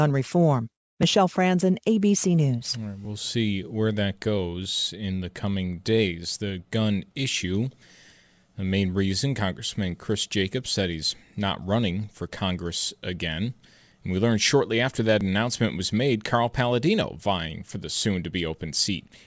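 Speech runs through with aliasing from start to finish. The sibilants sound gritty and metallic, and the spectrum stays dense right up to a hard edge at 8 kHz, which points to a drop to a 16 kHz sample rate without an anti-aliasing filter. Energy above that edge folds back down as unrelated tones roughly 20 dB below the voice. Clean band-limiting would only dull the top end. Here the folded components add harsh, wrong frequencies.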